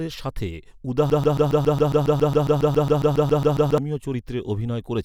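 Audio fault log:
1.1 to 3.78 s, broken-record loop: a 137 ms scrap of speech repeats back to back 20 times, giving a rapid mechanical stutter. Likely the player or stream stalled and kept resending its last chunk, so the speech meant for that stretch is lost.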